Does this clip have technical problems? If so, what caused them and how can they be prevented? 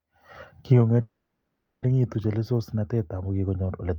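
Yes. From 1.01 to 1.84 s the speech stalls into a fading buzz or hiss, then resumes where it stopped. This is a call audio freeze, likely from delayed packets emptying the jitter buffer. A steadier network path or a deeper adaptive jitter buffer prevents it.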